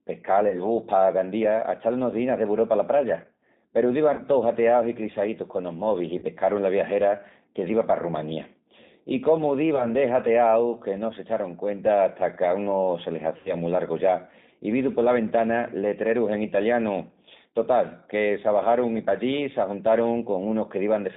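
From the start the speech carries G.729 codec damage throughout: it is rebuilt at 8 kbit/s from a vocal tract filter, pitch predictor and a few pulses per frame, so it sounds plainly rough and slightly synthetic. On a spectrogram the energy sits in a band from about 150 Hz to 3.7 kHz, with nothing above. Fine harmonic detail is blurred and consonant noise looks grainy.

Five dropouts of VoIP packet loss concealed by the speech codec interrupt this. At 0.49 to 0.57 s a 20 ms gap is concealed. At 4.14 to 4.21 s, just before "tous hateaus i clissaítus", and again at 6.18 to 6.24 s, 40 ms is lost. At 9.76 to 9.87 s, after "I cómu", 20 ms goes. The longest, 80 ms, falls at 13.37 to 13.53 s between "qu'a unu se le" and "mu largu ya i". In each, the decoder keeps repeating its last pitch and filter at falling gain, stretching the sound into a fading tone or noise. The spectrogram shows a frozen spectrum that dims, and the waveform shrinks before normal speech recovers a little late.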